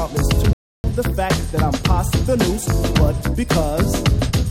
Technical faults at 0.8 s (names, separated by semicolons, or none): rebuffering stall